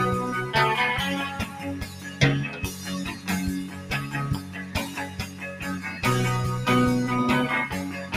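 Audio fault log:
throughout, noise suppressor applied to music or sounds: A noise suppressor built for speech stays active on this material. It judges sustained tones, room ambience and reverb as noise and keeps pulling them down, so the level swings by roughly 10 dB as its gain moves. Transients pass while held sounds and decays sink, giving the audio a pumping, fluttering, thinned-out quality across the whole clip.
1.45–1.63 s, 1.84–2.21 s, 2.54–2.88 s, 3.11–3.28 s, 3.65–3.90 s, 4.40–4.75 s, 5.08–5.62 s, sound cut by the noise suppressor: In each of these spans the suppressor classes the ongoing sound as noise and attenuates it harder than its surroundings. The dips reach about 5 to 7 dB and last from a fraction of a second to about half a second. Sustained and fading parts drop away or have their tails cut short, while sharp onsets still come through.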